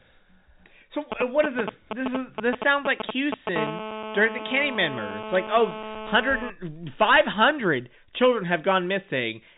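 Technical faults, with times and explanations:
1.12 to 3.58 s: GSM signalling bursts. A nearby 2G handset sends short groups of radio bursts at about 217 Hz while signalling, and the audio circuit rectifies them. The result is a galloping dit-dit-dit of ticks and brief buzzes, roughly as loud as the speech.
3.58 to 6.50 s: GSM phone buzz. Once the handset is in a call it bursts continuously at about 217 Hz, and the rectified pulses form a steady, raspy buzz rich in harmonics. It sits about 10 dB below the speech and has no relation to it.
7.02 to 7.50 s: hard clipping. The speech is driven about 9 dB past what the stage can pass, so its peaks are sliced flat. Those flat tops add harmonics far up the band, heard as harsh fuzz on the loud parts within the band-limited telephone sound, which stops near 3.8 kHz.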